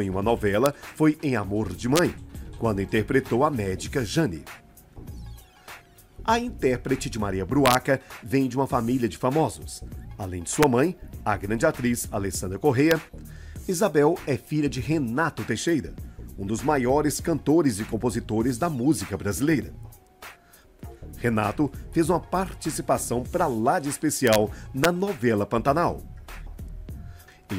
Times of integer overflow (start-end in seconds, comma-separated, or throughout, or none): 0.66, 1.96-1.99, 7.66-7.75, 10.63, 12.91, 24.27-24.36, 24.84